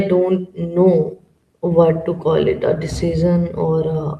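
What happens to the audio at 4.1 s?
Nothing goes wrong at 4.1 s; the speech carries on intact through that moment with no dropout, click or other fault.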